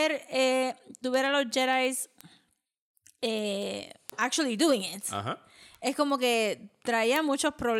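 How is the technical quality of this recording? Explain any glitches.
The recording is marred by a steady stream of word clock ticks running almost the whole length of the speech.

From 0.2 s to 7.75 s, sharp ticks of uneven strength recur about every tenth of a second, around seventy in all. The receiving device runs on its own clock, off by roughly 200 ppm, so a single sample is dropped or repeated at each slip. On a spectrogram these show as thin, evenly spaced vertical lines spanning all frequencies. In the waveform they appear as one-sample discontinuities.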